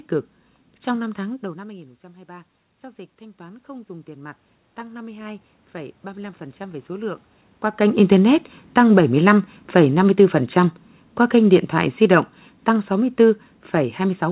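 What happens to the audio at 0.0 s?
Nothing goes wrong at 0.0 s; the audio is intact at that moment.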